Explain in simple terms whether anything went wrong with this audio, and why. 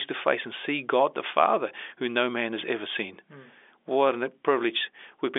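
Nothing went wrong that I could hear; the speech has the narrow, slightly boxy sound of an ordinary landline phone call, and that is simply how phone lines carry sound.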